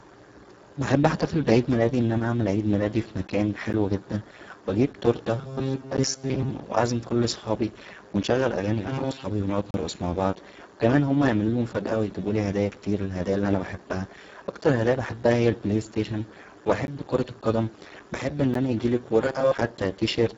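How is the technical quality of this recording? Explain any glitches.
The technical quality is poor: heavy low-bitrate codec damage runs through the whole recording, and there are several dropouts and stretches of buzzing.

Speex codec: The speech was encoded with Speex at a very low 5.8 kbps. That leaves the encoder few bits for the excitation signal, so it cannot rebuild the fine detail of the voice. The result is hoarse, noisy and somewhat robotic throughout. Nothing remains above 7.7 kHz, and the upper band that does survive is a shaped, hissy fill rather than real detail.

Block of digital silence: The output buffer most likely went unfilled in time, so blocks of samples dropped to silence. Four short holes fall at 3.73, 5.97, 16.87 and 18.54 s. Each lasts about 12 ms, which fits a 512-sample buffer. The 18.54 s hole comes after "كرة القدم بحب ان" and before "انا يجيلى". A longer 35 ms gap runs from 9.71 to 9.74 s, between "و نقعد" and "مع بعض و كمان". 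Each cut has no fade, so it sounds like a sharp tick or a brief hole.

Robotic sound from repeated short buffers: The likely cause is audio arriving too seldom, so the playback software kept looping the last short buffer while most of the real audio was skipped. The loop imposes a fixed 134 Hz pitch, which points to a buffer of roughly 7.5 ms. This turns the speech into a rigid, metallic buzz from 5.38 to 6.51 s, from 8.89 to 9.25 s (between "كل صحابى ونشغل اغانى" and "و نقعد"), and from 19.22 to 19.55 s.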